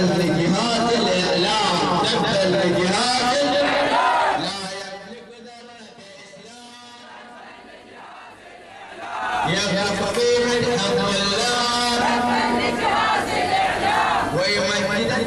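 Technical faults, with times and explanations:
8.76–9.48 s: zipper noise, a level change of around 20 dB applied in unsmoothed 3 dB steps about ten times a second, each step ticking audibly.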